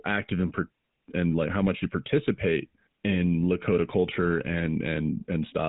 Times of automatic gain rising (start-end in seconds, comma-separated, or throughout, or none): none